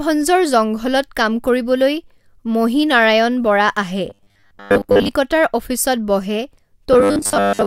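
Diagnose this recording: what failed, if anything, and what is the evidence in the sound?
Robotic sound from repeated short buffers shows up twice in this speech, from 4.10 to 5.10 s and again from 6.93 s to the end at 7.66 s. The voice goes rigid and metallic, with a steady 100 Hz buzz riding over it while the syllables still roughly track. That's likely a driver or buffer stage starved of data, looping about 10 ms chunks and skipping most of the real audio in those stretches.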